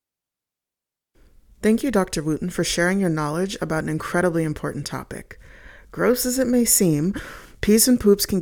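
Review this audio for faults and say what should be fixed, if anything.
Nothing stood out on listening to this speech recording, so there is nothing here that needs fixing.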